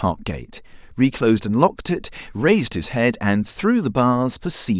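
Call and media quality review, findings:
No audible faults found.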